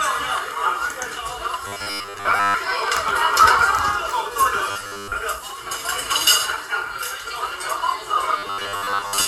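A rigid, metallic 100 Hz buzz takes over the sound from 1.67 to 2.54 s, 4.71 to 5.16 s and 8.38 to 9.27 s. This is robotic sound from repeated short buffers, likely a 10 ms chunk looped while most of the real audio is skipped.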